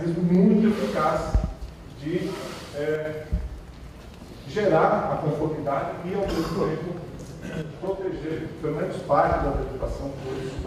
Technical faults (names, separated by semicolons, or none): one channel drops out